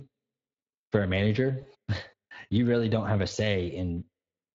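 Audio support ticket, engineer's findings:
Speex codec, whole clip: CELP speech coding with too little bit budget for the excitation, which fits a rate near 20 kbps. Plainly audible damage: speech grainy and hoarse, with a noisy, slightly synthetic edge throughout. Probable component: encoder on the send path, running a reduced quality setting.

VoIP packet loss concealed by the speech codec, 1.61 to 1.65 s: about 20 ms of audio missing, consistent with a single lost frame. The decoder extrapolated from its last pitch and filter state at falling gain. Heard as a brief stretched, fading blip, with speech weak or distorted for a short stretch after packets resume.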